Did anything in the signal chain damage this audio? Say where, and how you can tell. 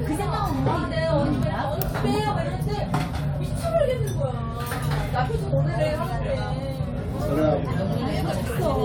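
Yes. At the driver or buffer stage, clock-matching software likely stepped the playback rate to correct drift, producing a drift correction step twice. From 3.80 to 4.72 s the sound runs 6.08% slow and drops about 109 cents, roughly a semitone. From 7.37 to 8.31 s it runs 6.08% fast and rises 102 cents. Speed and pitch move together and snap back abruptly, which points to a resampling ratio change rather than any pitch processing.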